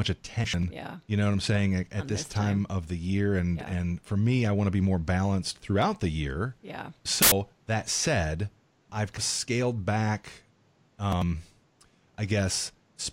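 Compressed frames skipped at 0.44, 7.13, 9.17 and 11.12 s: whole coded frames were missing or rejected by the decoder, so the speech jumps ahead. The jumps are nearly half a second, about a tenth, and about a fifth twice (the third lands just before "of scaled back").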